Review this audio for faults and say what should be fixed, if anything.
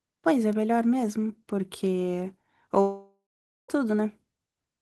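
A long network dropout runs from 2.81 s to 3.70 s. The speech stops and the receiver stretches the last sound into a fading buzz or hiss. After roughly a third of a second this decays into about 0.51 s of near-silence. About 0.88 s of speech is lost outright, and the audio resumes further on with no attempt to recover it. The likely cause is a burst of lost or badly delayed packets that exceeded what the jitter buffer and concealment could bridge. To prevent it, use a more stable network path and add forward error correction or retransmission with enough buffer headroom to ride out bursts of this length.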